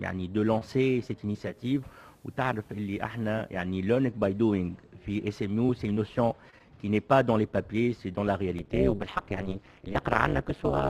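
At 1.34 s the digital radio blends to analogue FM over about 0.39 s, sitting there until 3.70 s. You get a faint hiss roughly 40 dB under the signal and the level drops about 2 dB while the set rides the FM copy.

From 8.59 s to the end there's overlap-add ripple. The frames were rejoined with an overlap that doesn't sum to flat gain, so the level pumps by about 60 dB around 200 times a second, giving a metallic buzz with extra tones around each note.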